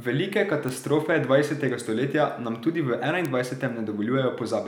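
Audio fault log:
0.69 s, 1.80 s, 3.25 s, bit error spike: sharp broadband ticks, unrelated to the speech, at about -16, -22 and -10 dBFS, the first two just before "dvajsetega stoletja nam tudi" and "stoletja nam tudi". Each is a single sample jumping by a power of two from a flipped bit, then returning.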